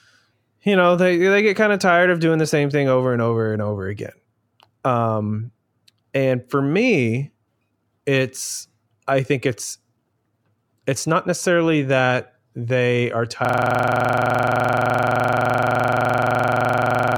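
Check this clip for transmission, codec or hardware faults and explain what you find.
One hardware fault is present. From 13.45 s, after "necessarily that they are", a system hang loop repeats one 42.67 ms slice, which fits a 2048-sample buffer, at 23.4 Hz. The result is a rasping stutter that lasts to the end.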